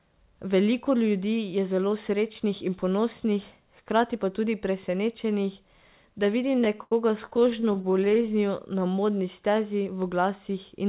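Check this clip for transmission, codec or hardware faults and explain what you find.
One transmission fault is present, heard through a narrowband call path with nothing above 4 kHz, consistent with G.711.

Repeated stalls (stutter), 6.47 to 8.28 s: the jitter buffer kept running dry, so the receiver stretched the last sound through 27 brief waits, longest 79 ms, making the speech drag and stutter.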